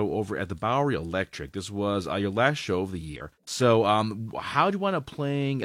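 A brief glitch at 3.16 to 3.21 s, after "last show of the", and another at 5.62 to 5.65 s come from damaged data in a compressed stream, where corrupted frames make the decoder misread and lose sync.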